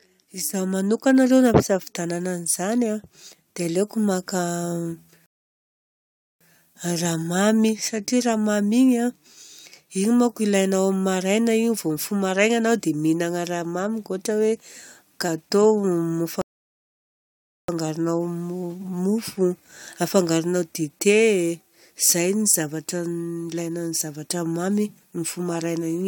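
Speech recording interrupted twice by a rebuffering stall, where playback ran out of downloaded audio and halted until more arrived. The first runs from 5.26 to 6.41 s and adds about 1.15 s of silence. The second runs from 16.41 to 17.69 s and adds about 1.27 s. Each time the speech picks up exactly where it stopped, with nothing skipped. The waveform shows a dead-flat line across each gap, and the spectrogram shows a clean, full-band blank column.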